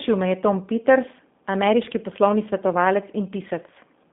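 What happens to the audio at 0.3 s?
At 0.3 s the speech carries G.729 codec damage, present across the whole clip. The codec rebuilds each 10 ms frame from a vocal tract model, a pitch predictor and a few pulses. The line band runs from 200 Hz to 3.6 kHz, and nothing passes above 3.7 kHz. The result is plainly audible, slightly rough and synthetic, which fits an 8 kbit/s codec.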